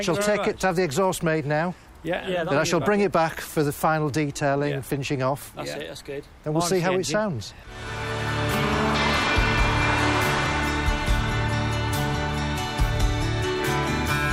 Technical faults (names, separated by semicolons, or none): none